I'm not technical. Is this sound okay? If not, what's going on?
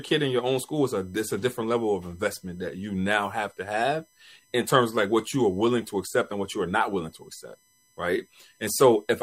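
No. A USB connection's electrical pulses, which repeat on a fixed schedule, are leaking into the recording through the power or ground wiring. The result is USB whine: a faint, steady, high-pitched tone under the speech from start to finish, sharpest around 8 kHz.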